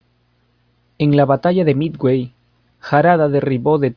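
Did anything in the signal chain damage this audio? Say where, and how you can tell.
No, nothing in the chain has damaged this speech recording. Listening through it, there is no sign of a problem at any stage between capture and playback.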